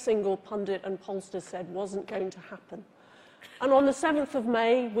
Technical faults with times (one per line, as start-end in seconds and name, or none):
none